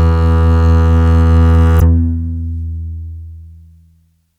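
At 1.77 to 1.82 s, damaged data in the compressed stream leaves the decoder misreading the frames there and losing sync until it locks onto a later frame header. For about 50 ms, the music breaks into a brief chirp or squawk.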